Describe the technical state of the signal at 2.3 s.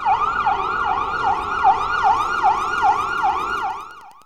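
Wi-Fi interference is present at 2.3 s, part of a span that runs from 2.04 s to the end of the clip. A nearby Wi-Fi radio's beacon transmissions, repeating every 102.4 ms, are being picked up and rectified by the audio circuitry, turning each radio burst into a small audible pulse. The result is a steady ticking at roughly ten times per second, sitting faintly beneath the sound at around 40 dB below the signal.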